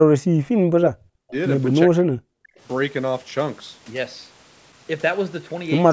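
The speech dips sharply from 0.0 to 0.11 s, then dips again from 0.55 to 1.34 s and from 1.85 to 2.59 s, falling by up to roughly 40 dB. This is likely speech suppressed in double talk, where the echo canceller mistakes overlapping speech for loudspeaker echo.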